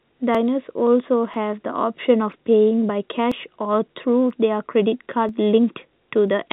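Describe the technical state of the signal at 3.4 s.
At 3.4 s, periodic USB or driver dropouts are active, spanning 0.35 to 6.28 s. Every 0.99 s, a blocked bus or driver skips about 10 ms of audio outright. The gaps sound as regular ticks wherever they fall on the telephone-band speech.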